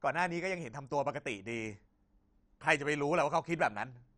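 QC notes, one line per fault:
throughout: likely MP2 compression. Dull, gurgling speech with nothing above 11.3 kHz, upper sub-bands starved of bits and switched off, which fits 48 kbps.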